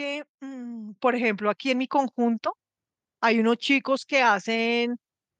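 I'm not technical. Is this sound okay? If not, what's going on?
No. Microphone volume stepped up at about 1.02 s: the calling software decided the microphone was too quiet and turned its input up in a single jump, so the voice and the background noise suddenly get noticeably louder together and stay louder.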